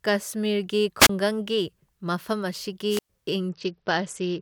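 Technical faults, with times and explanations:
0.99–1.10 s and 2.89–3.10 s, wireless microphone squelch dropouts: hiss swells, then the receiver mutes the speech for about 28 ms and then 107 ms.
3.49–4.41 s, Bluetooth SBC bit pool drop: treble dulls and gritty noise rises. This fits the bit pool falling from 31 to 8, near 66 kbps.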